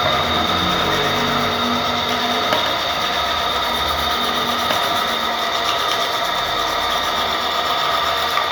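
An everyday-sound recording carries a doubled audio track from start to finish: a second, full-band copy of the same sound trails the original by roughly 150 ms, sitting around 10 dB lower. It has none of the decay or room colour of a real echo, just a clean, fixed-offset repeat. This likely comes from the signal being captured twice, once through a slower path, and summed.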